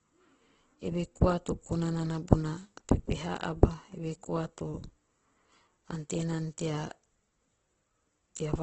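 From start to finish the speech carries heavy coding damage, most likely Opus compression running in its music-style CELT mode. Nothing survives above about 8.1 kHz, so the top is capped at wideband, and the starved bit budget gets papered over by filling bands with folded or noise-like content. The result is voiced sounds that come out rough and grainy rather than hollow or swirly, which fits a rate down around 12 kbps.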